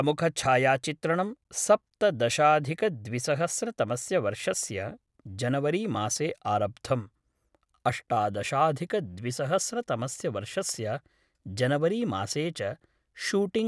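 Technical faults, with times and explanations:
Nothing stood out on listening to this speech recording.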